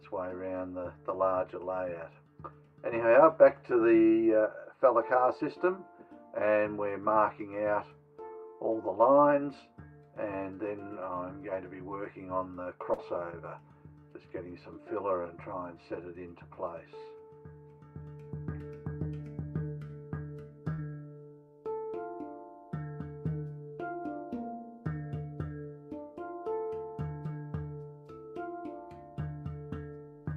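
This audio has two kinds of network glitch. There's a short stall from a late packet at 12.63, 19.87 and 20.90 s, where the last sound is held for 22, 27 and 27 ms until the packet turns up, so nothing is lost. Short concealed packet loss hits at 12.94 and 20.73 s, with about 40 ms each time replaced by a continuation of the preceding sound.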